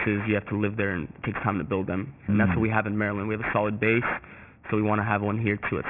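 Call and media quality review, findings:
Aliasing throughout the speech, start to finish. Sibilants come out gritty and metallic, with hiss landing at wrong, unrelated pitches. Band stops hard at 3 kHz. Probable component is a resampler dropping the rate to about 6 kHz (fits a 6 kHz target) with no anti-alias low-pass first. Everything above 3 kHz folds back down under it, and the folded energy sits only roughly 10 dB under the wanted signal.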